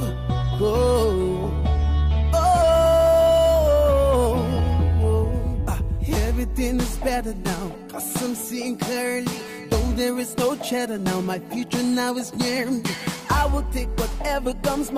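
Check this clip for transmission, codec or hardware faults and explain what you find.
Two related faults turn up, both about timing rather than tone.

Clock drift between sender and receiver runs through the whole clip. The sender's clock is slow by roughly one and a half percent, so the receiver's jitter buffer keeps running short and it has to pad the audio out. The result is a steady underlying tempo mismatch.

Repeated timing corrections are how that drift gets patched, from 0.57 s to 14.88 s. The receiver keeps repeating small slices to stay in step, so playback sits at about 98% speed and gains around a fifth of a second overall. The edits come at uneven intervals and, if heard at all, come across as small hiccups or a slightly unsteady tempo.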